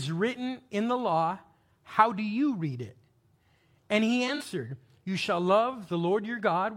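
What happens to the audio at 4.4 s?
AAC frame loss with concealment runs from 4.27 to 4.44 s. About 85 ms of audio, consistent with four lost frames, drops out in gaps of up to about 40 ms. The decoder patches each gap from the preceding spectrum, leaving a smeared, noisy, phasey stretch.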